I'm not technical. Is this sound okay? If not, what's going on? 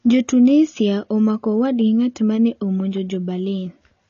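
No. The speech was likely squeezed too hard by AAC compression, which discards detail to save space. From start to finish nothing above 7.2 kHz survives, so it sounds dull and muffled, and hissing sounds come out smeared and fizzy.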